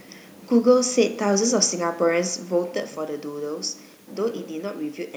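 Nothing here points to a technical fault; the room noise behind the speech belongs to the recording itself, and the level shift around 2 seconds sounds like the talker simply moving relative to the microphone.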